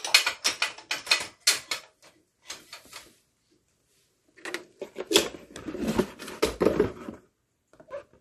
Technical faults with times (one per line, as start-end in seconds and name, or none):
0.00-8.21 MP3 compression